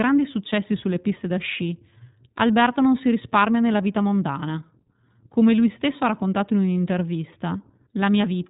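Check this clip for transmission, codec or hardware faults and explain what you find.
The speech sounds band-limited and slightly rough and synthetic throughout, with nothing above about 3.8 kHz. This is iLBC codec damage: each frame's excitation is coded independently, consistent with 20 ms frames and a 15.2 kbps mode.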